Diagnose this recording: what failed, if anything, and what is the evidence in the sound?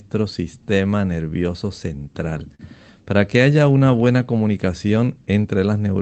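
Network and jitter buffer stage: between 1.99 and 2.61 s the speech catches and hitches four times, with the longest stall about 42 ms. That's repeated stalls (stutter). Packets arrived late, the buffer ran dry, and the receiver stretched the last sound to bridge roughly 76 ms without losing anything.

Same stage, different symptom: from 3.59 to 4.17 s the speech drags at about 88% speed while the pitch holds steady. That's a jitter buffer slow-down. The receiver repeated single pitch periods to rebuild its reserve, adding about 77 ms and drawing out the sounds.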